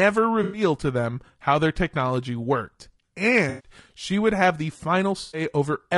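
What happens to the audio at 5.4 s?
At 5.4 s the audio is ending a dropout from AAC frame loss with concealment. It runs from 5.21 to 5.41 s, just after "she would have the". The decoder lost data, which fits six missing frames, and patched the gap from the last good spectrum. The result is a smeared, noisy, phasey patch.

Underneath, the speech sounds rough and grainy, with noise between the harmonics and a thin, synthetic top band. The likely cause is low-delay AAC compression, AAC-ELD, at a rate that fits 32 kbps. Its short frames resolve pitch poorly.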